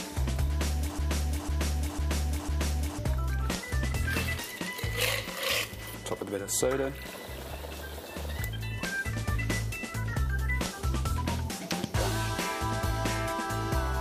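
At 0.99 s the audio locks into a broken-record loop that lasts until 2.99 s. A fragment of about 0.5 s plays four times in a row, exactly the same each time, with no gap between repeats. The stutter is mechanical and even. The likely cause is a stall in the player, encoder or stream, which kept resending the last piece it held. The sound that belonged in those two seconds never arrives.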